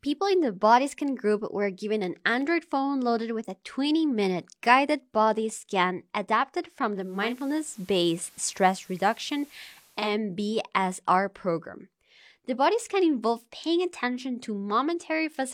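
After "guided body scan adapted", at 6.93 s, digital radio blending to analogue cross-fades over 485 ms to FM: hiss appears some 30 dB below the speech, and level shifts about 2 dB. Unlike added noise, it blends back to digital at 10.19 s.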